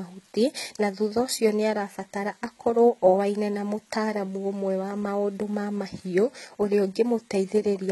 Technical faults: HE-AAC compression

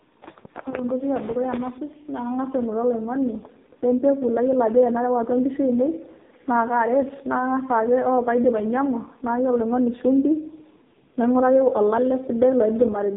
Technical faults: AMR narrowband mobile codec

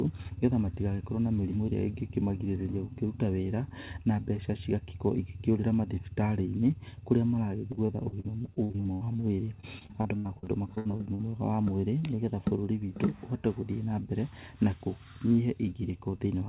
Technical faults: repeated packet loss (robotic sound)

